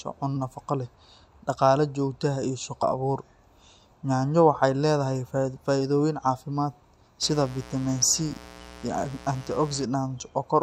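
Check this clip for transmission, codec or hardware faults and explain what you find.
Two faults are audible in the speech.

At 2.81 s, compressed frames are skipped. Damaged or missing frames never reach the output, so roughly 70 ms of speech vanishes, which fits about three frames of 23.2 ms. Overlapping neighbour frames turn the jump into a short smeared blip.

From 7.23 to 9.85 s, mains buzz intrudes. Switching spikes from a 60 Hz supply leak in twice per cycle, spraying harmonics up into the kilohertz range. The result is a steady, raspy buzz sitting about 20 dB below the speech.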